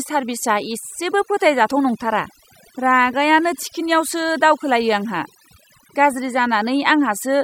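Overdone noise removal runs through the whole speech clip: a noise reducer set too strong pulls individual frequency bands down whenever they sit near its noise estimate, so the background drops and breaks up into twinkling specks and the quieter parts of the voice are pulled down with it.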